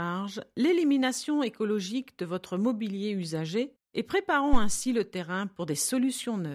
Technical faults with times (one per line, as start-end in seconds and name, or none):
4.53-4.81 phantom power thump